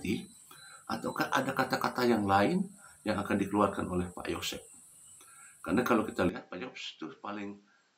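At 6.29 s the sound abruptly turns duller and quieter, dropping by about 10 dB with no gap at the transition, and stays that way to the end of the clip. Above 7.6 kHz nothing is left, and a faint new background noise, roughly 35 dB below the signal, sits underneath. This is most likely an input switched to a poorer device mid-recording, a second microphone or headset path with a narrower band, lower gain and its own noise floor.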